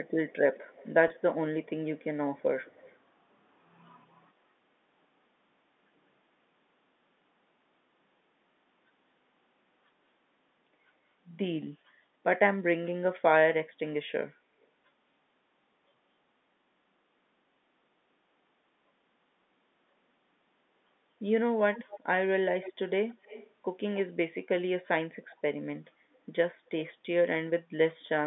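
From 0.06 to 2.04 s, a faint delayed copy of the speech trails the original by about 173 ms. It sits well below the main signal. This is echo leak. The likely cause is a far-end loudspeaker whose echo canceller let part of the microphone pickup return down the line. It recurs at 2.37 to 2.98 s, very quietly. Later the delay grows to about 230 ms, at 21.75 to 22.0 s, where the echo is strongest, about 15 dB below the speech, and at 22.61 to 23.51 s. Brief, weak scraps follow at 25.31 to 25.37 s and 26.84 to 26.93 s, trailing by about 240 ms.

Inside the first echo, at 1.08 to 1.10 s, one 20 ms packet is lost. This is packet loss with pitch repetition. The receiver fills the gap by repeating the last pitch cycle. The result is a brief held, slightly buzzy tone before the sound resumes.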